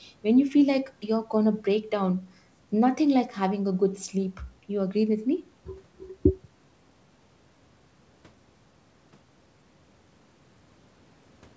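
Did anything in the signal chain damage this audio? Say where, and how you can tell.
No, nothing in the chain damaged this speech.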